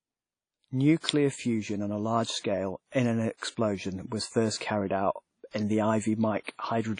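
A low-bitrate transform codec, likely WMA compression, has been applied to this speech recording. Nothing survives above 10.1 kHz, and the plainly audible ringing, washy texture and signal-following hiss fit a rate of around 32 kbps. Because the same codec spreads each block's quantisation noise across the whole block, pre-echo appears at 1.0 s just before "fusion on a large", at 2.40 s between "fusion on a large" and "in an", at 3.37 s, at 4.58 s just after "was first", and at 6.44 s. Each is a 33 to 47 ms hiss that runs ahead of a sharp onset and leaves that onset sounding softened.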